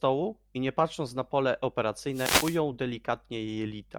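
From 2.11 to 2.60 s a wireless microphone noise hit occurs: the FM radio link fades, receiver noise rises, and a burst of static swishes over the speech.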